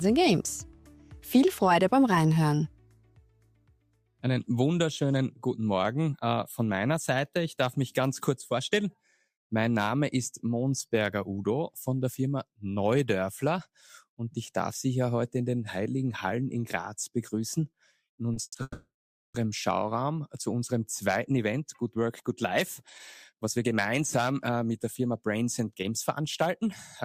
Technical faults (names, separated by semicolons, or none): short stall from a late packet; call audio freeze; jitter buffer speed-up